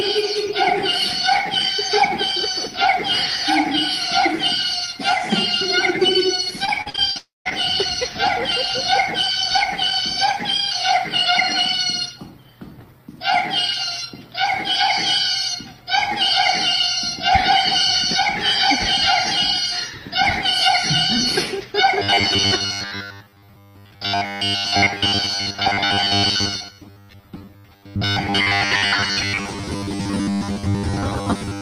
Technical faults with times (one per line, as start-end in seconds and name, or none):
6.65-7.53 repeated packet loss (robotic sound)
7.17-7.47 long network dropout
21.99-31.62 robotic sound from repeated short buffers